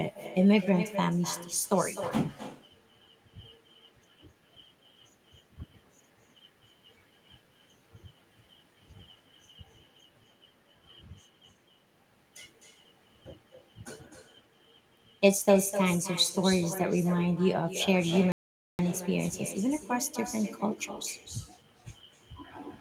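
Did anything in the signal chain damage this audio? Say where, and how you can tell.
Yes. Throughout the speech, every phrase is trailed by a quieter, thinner copy about 12 dB down, arriving roughly a third of a second later. That is echo with no canceller: the far end's loudspeaker leaks into its microphone during call processing and returns over the network unremoved.

The audio cuts to silence from 18.32 to 18.79 s, a gap of 470 ms, then carries on. This playback stall most likely comes from the player's buffer running dry or its output thread being blocked until data arrived again.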